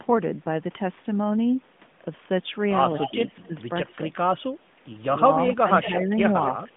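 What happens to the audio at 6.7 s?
Speech suppressed in double talk occurs from 6.65 to 6.76 s, running to the end of the clip. The likely cause is an echo canceller that heard both talkers at once and could not tell its own talker from the loudspeaker echo, so it turned everything down. The speech dips by roughly 10 dB at its deepest, losing level in brief pieces that add up to about 70 ms.

Just before that, from 6.47 to 6.63 s, an echo leak is audible. A copy of the speech returns about 224 ms late and about 10 dB below the direct sound, likely because a loudspeaker's output reached a microphone and the far end's echo canceller did not fully remove it. The returned copy is a short, quieter copy that trails the original. All of this sits within the narrow phone band, with nothing above 3.8 kHz.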